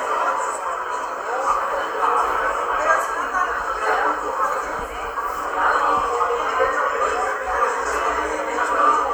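No technical faults can be heard anywhere in the audio.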